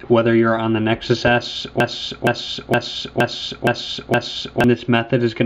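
From 1.80 s to 4.64 s the audio falls into a broken-record loop: a fragment of about 0.47 s plays six times back to back, identically each time, and whatever should have sounded during those seconds is gone. The likely cause is a player, encoder or stream that stalled and kept resending the last piece it held. On a waveform or spectrogram, the span shows six identical blocks in a row, each boundary an abrupt seam.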